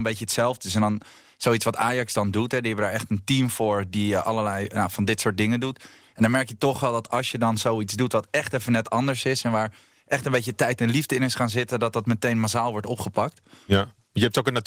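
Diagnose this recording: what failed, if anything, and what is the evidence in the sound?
Nothing failed in this recording.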